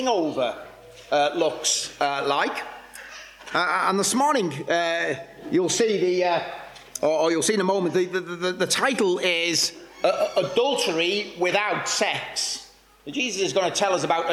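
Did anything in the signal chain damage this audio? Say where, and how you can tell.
No, nothing in the signal chain audibly damaged this audio.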